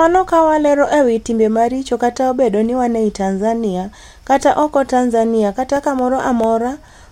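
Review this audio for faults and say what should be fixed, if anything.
Near the end of the speech, from 5.76 s to 6.44 s, there are four CD scratch ticks, evenly spaced at roughly six per second, the longest only a couple of milliseconds. A surface blemish is destroying more data on each rotation than error correction can rebuild, so the player patches or mutes those samples. A spectrogram shows thin vertical broadband streaks, and the waveform shows tiny notches or flattened gaps. To prevent this, clean or replace the disc, or rip it with a secure, re-reading extractor.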